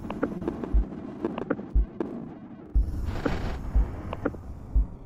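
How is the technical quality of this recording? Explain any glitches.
One glitch stands out. Short concealed packet loss at 0.37 to 0.43 s: a brief stretch of audio arrived too late for the decoder, so the receiver extended the preceding sound to cover the gap for about 33 ms before blending back. It is heard as a quick smear or wobble, with roughly 20 ms of the original sound lost.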